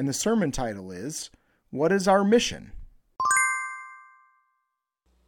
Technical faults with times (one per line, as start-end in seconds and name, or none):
none